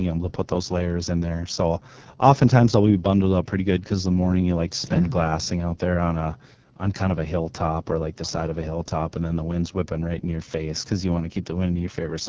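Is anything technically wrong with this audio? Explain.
Yes, several things are wrong with this speech recording.

AMR wideband (HD Voice) codec, throughout: the whole clip has been through AMR-WB at 6.6 kbit/s, one of its two lowest rates. The codec rebuilds speech below 6.4 kHz from a pulse-excited vocal tract model and fills 6.4 to 7 kHz with shaped noise. At this rate the excitation is too coarse to follow the voice faithfully, so the speech comes out heavily damaged, rough and raspy.

Background gated by the echo canceller, 6.56 to 6.78 s: while the far-end loudspeaker was active, the echo canceller clamped down on the microphone, pulling the room sound down by as much as about 40 dB. The background ambience drops away abruptly for roughly a fifth of a second, then comes back when the canceller releases its grip, leaving a brief hole in the sound bed.

Echo leak, 7.94 to 7.99 s: a faint, delayed copy of the voice appears for about 50 ms, arriving 412 ms after the original and sitting roughly 30 dB below it. 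This is likely residue that a loudspeaker-side echo canceller failed to remove from its microphone and sent back down the line. It surfaces as a short scrap rather than a sustained repeat.

The call microphone processing is working as it should, with nothing above 8 kHz.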